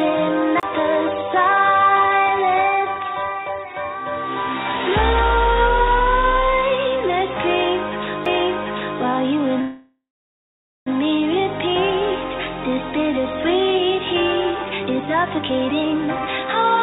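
At 0.60 to 0.63 s there is a CD skip: a tick and a very short mute, then the sound picks up from a different point on the disc's spiral. A second CD skip at 8.26 s is even shorter. Unlike a call dropout, these jump position rather than pausing.

From 9.61 to 10.88 s the last sound is stretched into a fading buzz that sinks into silence for most of that time, then resumes exactly where it stopped, with nothing lost. This is a call audio freeze, likely caused by delayed packets emptying the jitter buffer. Unlike a skip, it inserts a gap of about 1.25 s rather than jumping away.

From 14.54 s to the end, a jitter buffer speed-up plays the audio at about 129 percent speed without raising the pitch, so it sounds hurried. It does this by repeatedly trimming pitch-period-sized pieces to shed built-up delay. Throughout, the band stops at 4 kHz, which fits a 64 kbps G.711 call codec.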